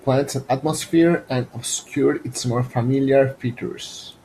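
At 1.74 to 1.78 s the speech is briefly hit by DAB burbling, a short burst of noisy blips. Under weak reception, around 0.3 percent of bits slipped past error correction into the MP2 stream, corrupting samples so that individual sub-bands carry short blips of noise. The span fits two damaged frames. Unlike a dropout or concealment gap, the audio never goes silent or repeats; instead narrow frequency bands spike out of place.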